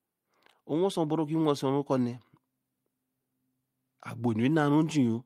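No faults turn up anywhere in this recording; the speech simply runs along without any glitch, dropout or disturbance to point to.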